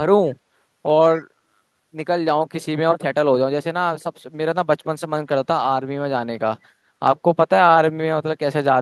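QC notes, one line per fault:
1.17 to 1.21 s, echo leak: a brief, faint scrap of the speech returns about 133 ms after the original, well below the direct speech at roughly 25 dB down, lasting only some 40 ms. The likely cause is a far-end speakerphone whose echo canceller failed to fully subtract what its microphone picked up from the loudspeaker, so a residue travelled back down the line. Its short duration and low level make it sound like a faint, clipped ghost of the speech rather than a clear repeat.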